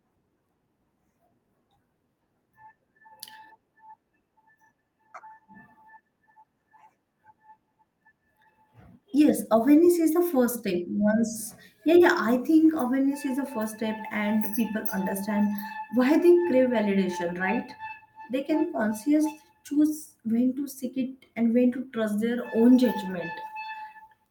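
No technical faults are audible anywhere in the speech recording.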